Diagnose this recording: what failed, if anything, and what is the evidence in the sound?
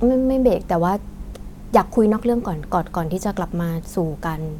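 Nothing failed, and the sound gives no evidence of any fault.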